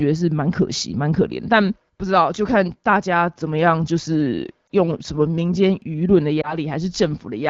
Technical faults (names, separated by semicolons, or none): lost AMR speech frames